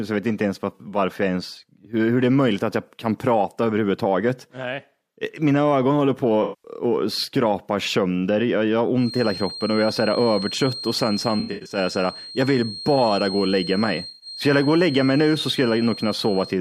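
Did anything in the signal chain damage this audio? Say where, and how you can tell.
Yes. AAC frame loss with concealment, at the codec and network stage: 0.75–0.81 s after "vet inte ens var", 6.42–6.71 s after "mina ögon håller", 11.40–11.77 s and 14.09–14.26 s. Each is patched over as the decoder rebuilds missing frames from the last good spectrum.

Feedback whistle from 8.94 s, after "sönder jag jag har", to the end. A thin, steady 4.2 kHz tone sits some 15 dB below the speech and swells and fades slowly in level. It is likely a loudspeaker-to-microphone loop held just short of runaway.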